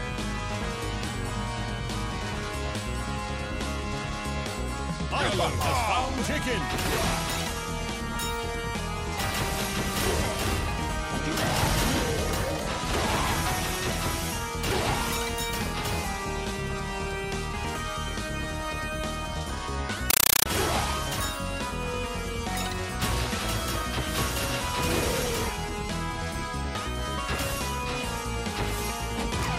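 From 20.10 to 20.46 s the audio gives way to a compressed stream played as audio: an AC-3 bitstream, its density fitting a 384 kbps encode, is treated as plain samples instead of being decoded. Each frame becomes an 8 ms blast of very loud noise followed by silent padding, repeating at 31.25 Hz. Unlike random digital noise or a codec glitch, this static chatters with a steady, machine-like pulse.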